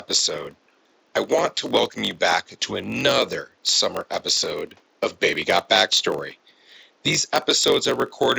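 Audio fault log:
Throughout, block size mismatch (padded): a steady buzz at about 47 Hz sits under the speech, which also drags about 6% slow while keeping roughly its normal pitch. The room noise stays about 40 dB below the speech. One stage hands over blocks shorter than the next stage reads, and the shortfall is filled with silence. This inserts a tiny gap once per block, and the gap rate fits a 1024-sample read block. Those gaps stretch the timing without shifting pitch.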